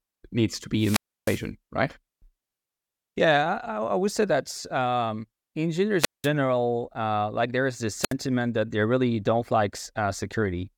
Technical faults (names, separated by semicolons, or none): wireless microphone squelch dropout